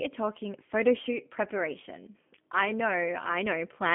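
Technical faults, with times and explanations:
Throughout, G.729 codec: the speech sounds narrow and boxy, with a slightly rough, synthetic edge that is plainly audible. Nothing comes through above about 3.6 kHz, and the low end thins out below roughly 150 Hz. This is telephone-band coding at 8 kbit/s. Each 10 ms frame is rebuilt from a vocal tract filter, a pitch predictor and a handful of pulses rather than the original waveform, so fine texture is lost.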